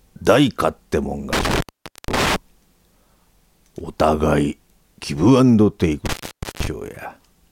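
You've got an intermittent contact problem here, twice. Around 1.33 to 2.36 s, and again from 6.06 to 6.67 s, the sound drops out with a crackle at each edge, and each gap lasts about 0.48 s with just faint hiss underneath. That's the signature of a loose cable or plug briefly losing its connection and then reseating, so I'd check the leads and connectors in the chain.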